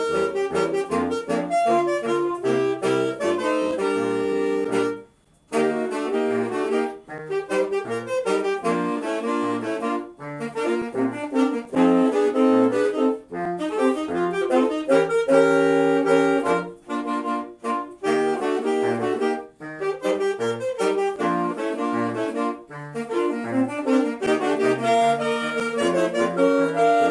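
Nothing goes wrong anywhere in the clip, so there's no fault here to point out.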